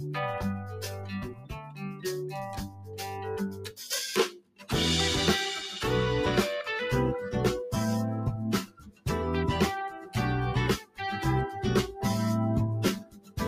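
A noise suppressor applied to music or sounds, one built for speech, stays active across the whole clip. It treats steady, sustained content as noise and turns it down, so the level swings by about 15 dB as attacks pass and held material and tails sink. This gives the audio a pumping, thinned character. Ordinary compressor pumping follows overall loudness and ducks after loud hits. Here, sudden sounds mostly come through, and it is the steady and decaying parts that get pulled down.

The clearest cases of sound cut by the noise suppressor fall at 0.0–0.16 s (about 5 dB), 0.56–3.26 s (about 15 dB), 3.45–3.78 s (about 13 dB), 4.28–4.7 s (about 17 dB), 8.63–9.06 s (about 17 dB), 10.01–10.16 s (about 9 dB), 10.8–11.0 s (about 16 dB) and 12.99–13.39 s (about 17 dB). In each, the sound sinks or its decay is cut short rather than vanishing outright. That partial, shaped loss is what separates it from a dropout or a hard gate.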